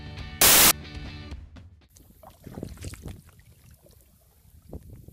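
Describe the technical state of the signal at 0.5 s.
At 0.5 s you're in a burst of samples built from the wrong bytes, running about 0.41 to 0.71 s. The bytes get misassembled, so the jittery low bits dominate and you hear loud, harsh broadband noise.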